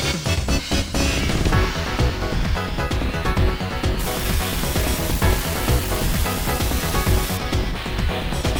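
From 3.99 s to 7.37 s, an unreliable data bit corrupts the audio: one line in the digital path is marginal, so its bit flips in a random share of samples. Every flip adds a spike of identical size, about -18 dBFS, because the same bit weight is always wrong. The result is a steady crackle or fizz laid over the sound, continuing through quiet moments and pauses until it stops at 7.37 s.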